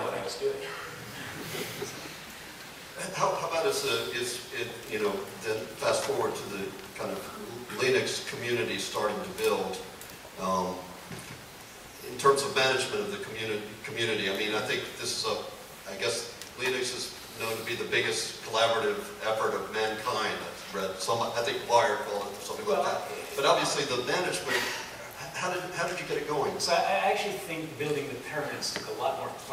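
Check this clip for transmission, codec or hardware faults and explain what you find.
No transmission, codec or hardware faults.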